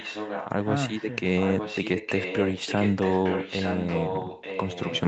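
A speech clip with echo leak: a delayed copy of the talker, about 10 dB under the voice, trails about 0.91 s behind, from 0.00 to 0.67 s, then louder, only a few decibels under the voice, from 0.89 to 5.01 s. The likely cause is a far-end loudspeaker whose echo canceller let its microphone pickup return.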